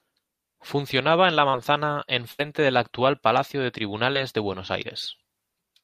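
Short concealed packet loss at 1.49 to 1.55 s: about 40 ms of the speech never reached the decoder in time, so the receiver stretched the preceding sound across the hole before rejoining the real audio, leaving a brief smear. At 2.31 to 2.41 s comes a burst of packet loss. Roughly 80 ms went missing, and the concealment prolonged the last sound while fading it, giving a held, dying tail before the audio resumes further on. Another short concealed packet loss at 4.13 to 4.17 s patches a 20 ms gap, heard as a quick smear.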